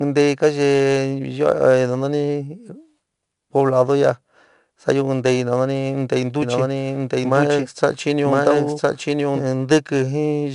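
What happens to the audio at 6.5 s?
Right after "taií no nani dei", at 6.42 s, a doubled audio track kicks in and runs to 9.44 s: a full-band copy about as loud as the original, trailing by roughly a second, starting and stopping abruptly, likely from a second capture path or an edit. Underneath, the 4-bit ADPCM compression adds gritty, level-following hiss and rough attacks, with nothing above 10.7 kHz.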